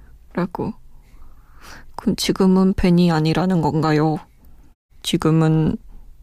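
No technical faults are audible anywhere in the speech.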